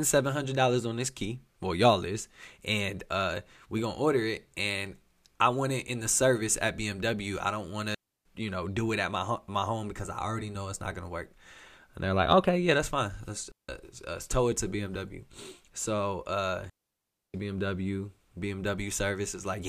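Digital wireless dropouts cut this speech clip at 7.94 s (about 310 ms, after "I don't want"), 13.52 s (about 170 ms, before "uh tow it to") and 16.70 s (about 645 ms): the receiver lost too much data and muted quickly, leaving clean near-silent holes with no noise burst.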